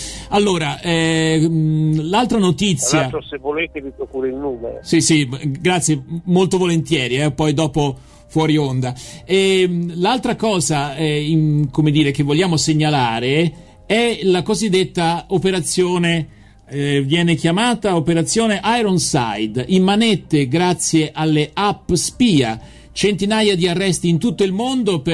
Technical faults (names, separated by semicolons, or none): none